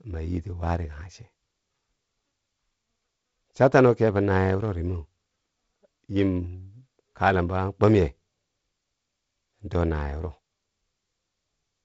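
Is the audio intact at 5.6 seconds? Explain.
Yes, at 5.6 seconds the speech is intact, with nothing breaking up or dropping out and only the light upper-band hiss of G.722 wideband telephone coding and no content above about 7.7 kHz.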